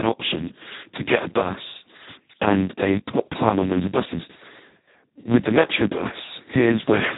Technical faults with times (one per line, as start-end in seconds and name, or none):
0.00-7.18 Speex codec